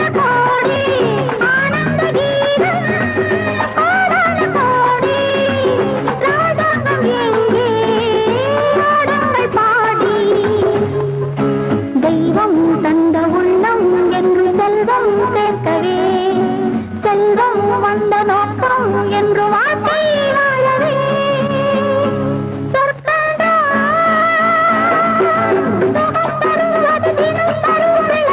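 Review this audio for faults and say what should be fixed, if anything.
A skip ahead occurs at 0.76 to 0.78 s. About 0.4 s of audio is missing, and the two sides are butted together with no fill, so the sound lurches forward rather than pausing. Unlike a concealed packet loss, there is no smeared or synthetic bridge and no silence, just an abrupt splice where later audio was waiting and earlier audio was discarded, likely by an overflowing jitter buffer. Sizing the buffer to absorb bursts without overflowing would prevent this.

A jitter buffer speed-up runs from 1.22 to 3.07 s. Playback is about 10% fast at unchanged pitch, as short pitch-period-length slices are cut out repeatedly, trimming around a fifth of a second of excess delay. A faster sample clock would raise the pitch along with the tempo, but here only the pace changes, and the sound is rushed without sounding higher. Smoothing packet delivery so that delayed packets don't arrive in a burst would prevent this.

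The call path itself contains nothing above 4 kHz, consistent with G.711 A-law at 64 kbps.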